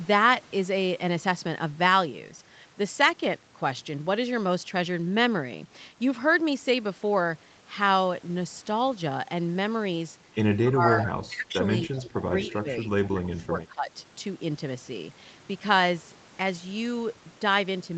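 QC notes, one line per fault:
10.62–11.1, 11.27–11.54, 11.88–12.26 and 12.51–13.9 s: speech suppressed in double talk. The level dips in pieces, dropping about 15 dB in the first and third stretches and about 20 dB in the second and fourth. The longest run, from 12.51 to 13.9 s, is chopped for roughly a second in total. This is likely an echo canceller that cannot tell the near talker from loudspeaker echo while both sides speak, so it turns both down.
11.0–11.05, 11.94–11.99, 12.42–12.59 and 13.24–13.29 s: echo leak. Short scraps of a delayed copy of the sound arrive 242 ms behind the original, between about 10 and 25 dB below the main speech. The loudest is at 11.0 s and the weakest at 13.24 s. They fall inside or overlap the suppressed stretches, where a loudspeaker-side echo canceller has likely let part of the picked-up signal through and sent it back down the line.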